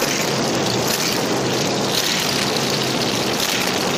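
Cable scratch noise runs from 2.15 to 2.47 s, a dense, uneven burst of scratching and rustling sitting roughly 10 dB below the sound. It is likely caused by a worn cable or connector being moved, its contact resistance fluctuating rapidly during that moment.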